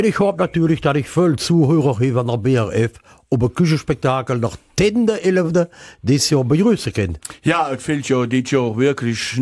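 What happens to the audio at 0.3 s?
Nothing goes wrong at 0.3 s; the audio plays through that moment intact, with no dropout, click or other fault to be heard.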